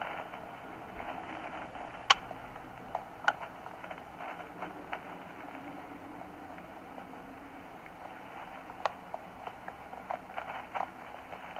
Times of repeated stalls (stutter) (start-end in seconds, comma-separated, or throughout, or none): none